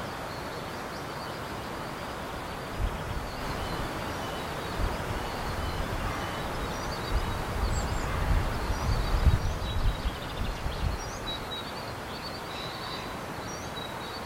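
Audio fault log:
3.40–9.38 s, doubled audio track: a second full-band copy of the sound runs about two seconds behind the original, at roughly the same level, so every event is heard again as a clean repeat with no decay or room colour. It is likely caused by the sound being captured twice through a slower second path. On a spectrogram the pattern of energy reappears shifted two seconds later; the waveform shows the copy starting and stopping abruptly at 3.40 and 9.38 s.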